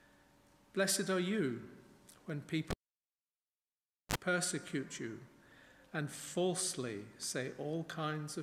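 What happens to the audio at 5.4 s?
Nothing goes wrong at 5.4 s; the audio carries on intact through that moment, with no dropout, click, glitch or other fault.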